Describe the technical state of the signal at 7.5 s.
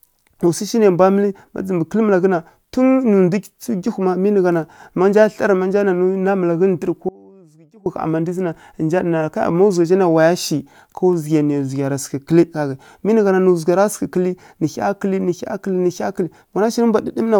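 At 7.5 s the speech is in an audio dropout to a faint residue, running from 7.09 to 7.86 s, about 0.77 s long. The signal cuts abruptly to a weak leak roughly 25 dB down, likely a brief loss of the wanted feed while the downstream path stayed live.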